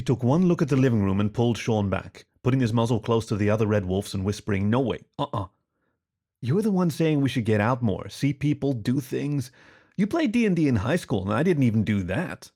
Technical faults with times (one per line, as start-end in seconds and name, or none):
none